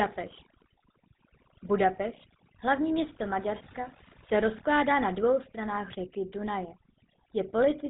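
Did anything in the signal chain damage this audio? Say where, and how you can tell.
Yes. Overdone noise removal runs through the whole clip, at the call-processing stage. The background drops and breaks up into twinkling specks, because bands near the noise estimate are pulled right down, taking quiet parts of the voice with them.

The GSM full-rate codec also runs throughout. The voice carries a buzzy, gravelly roughness, and nothing survives above about 3.9 kHz, which fits 13 kbps GSM. The codec rebuilds speech from a vocal-tract model driven by sparse, regularly spaced pulses.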